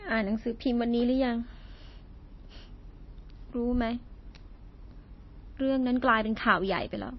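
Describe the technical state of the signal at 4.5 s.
At 4.5 s the speech carries plainly audible damage that runs through the whole clip, not just this moment, and is likely caused by MP3 compression. Nothing is present above 5.8 kHz, so the treble ends at a hard ceiling and s sounds lose their edge. Weak frequency lines drop in and out between frames, giving a watery, swirling texture and smeared attacks, which fits a low bitrate of roughly 25 kbps.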